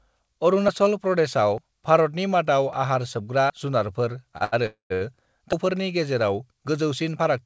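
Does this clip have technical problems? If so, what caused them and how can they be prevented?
Yes. At 1.58 s, 2.73 s and 3.50 s the speech jumps abruptly, and no gap is heard. The first two skips lose about 40 ms each. The third loses roughly a tenth of a second. This is most likely a dropped buffer (overrun): the capture hardware overwrote samples before the program read them, and the surrounding audio was spliced together. Unlike a stall, material is actually missing rather than held. Prevention: give the capture thread higher priority or a larger buffer so it always reads in time.

Between 4.38 and 4.42 s, 4.44 and 4.54 s, and 4.94 and 5.03 s, a sound is held unnaturally long with a slight buzz or dip, for 25 ms, 77 ms and 65 ms. These are short stalls from a late packet: the jitter buffer ran dry, so the receiver stretched the last sound until the packet arrived, then resumed at the same point. 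Nothing is lost, which separates these from the overruns, and they never fade to silence. Prevention: allow a slightly deeper or adaptive jitter buffer.

From 4.66 to 4.92 s the sound turns into a buzz or hiss that dies away, leaving about 140 ms of silence within a 240 ms insertion, before the speech carries on where it stopped. This is a call audio freeze, likely caused by packets held up long enough to exhaust the jitter buffer. It differs from the short stalls by its length and its decay to silence. Nothing is skipped, unlike an overrun. Prevention: improve network stability or prioritise call traffic. The call path itself, a G.722 link with nothing above 8 kHz, is audible as a band-limited sound and is not a fault.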